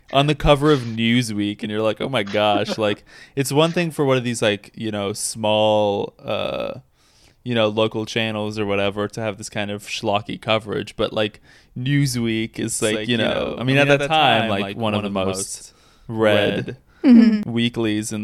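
A second, slower capture path or a misaligned edit is likely feeding the speech in twice from 12.81 s to 17.43 s, a doubled audio track. A clean copy about 5 dB quieter trails roughly a tenth of a second behind, switching on and off abruptly.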